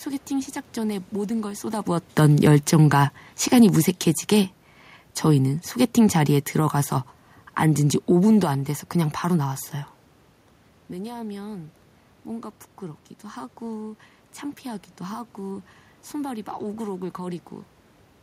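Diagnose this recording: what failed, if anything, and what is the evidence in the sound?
The automatic gain control in the call processing stage judged the input too loud or its background noise too strong and wound its gain down. Between 2.18 and 4.63 s the speech and the room noise sink together by about 3 dB, unlike the talker's own level shift around 1.5 s.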